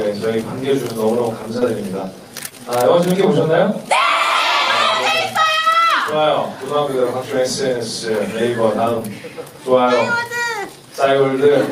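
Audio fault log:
1.59–1.63 s, 2.49–2.53 s, 5.55–5.59 s, 8.99–9.02 s: short concealed packet loss. Each time about 20 ms of audio went missing, and the receiver filled the gap by extending the preceding sound before blending back. The result is a brief smear or wobble, not the silent gap or hard click of an unconcealed dropout.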